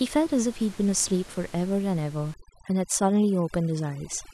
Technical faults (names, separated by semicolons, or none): overdone noise removal